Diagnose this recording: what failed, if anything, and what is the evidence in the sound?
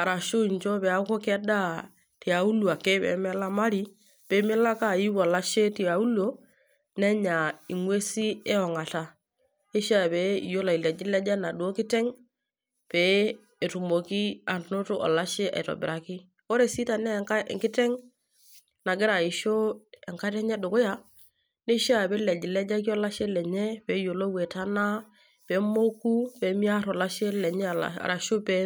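Nothing failed: listening to this speech recording turns up no evidence in the sound of a fault at any stage.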